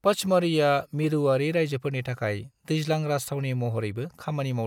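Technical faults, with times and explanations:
No technical faults found.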